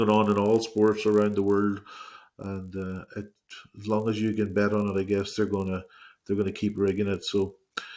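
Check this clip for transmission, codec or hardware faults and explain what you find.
One fault runs through the whole clip. A low buzz at a steady 50 Hz sits under the sound from start to finish and is present only while there is signal, never in the gaps. This is a resampler restarted on every block. The conversion, which points to a change from 44.1 kHz down to 16 kHz, handled each 20 ms block on its own. At every block edge it lacked the real neighbouring samples, so each boundary picks up a small error. Repeated 50 times a second, those ticks fuse into the buzz.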